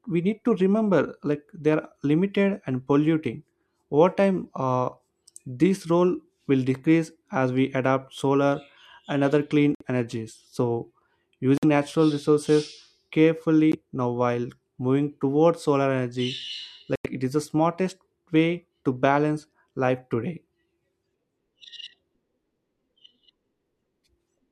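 Bluetooth stalls break this speech clip four times: at 9.75–9.82 s after "solar and other clean", 11.58–11.65 s, 13.72–13.75 s before "now while moving towards", and 16.96–17.06 s before "it is the smartest". Each drops to silence for 15 to 92 ms, then resumes. The likely cause is interference delaying wireless packets, so the headphones' buffer ran dry and playback paused until retransmissions arrived.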